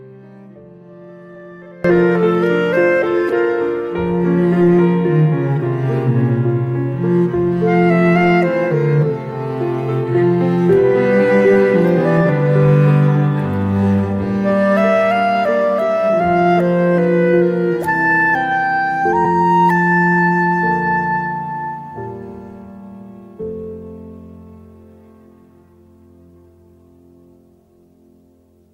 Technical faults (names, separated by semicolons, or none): one channel inverted; compressed frames skipped